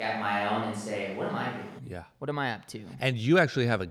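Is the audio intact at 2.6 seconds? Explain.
Yes, the audio is intact at 2.6 seconds, with no fault at that moment.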